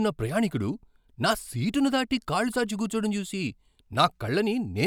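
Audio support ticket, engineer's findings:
No faults found on listening; speech clip checked end to end, nothing to attribute to any component, no action required.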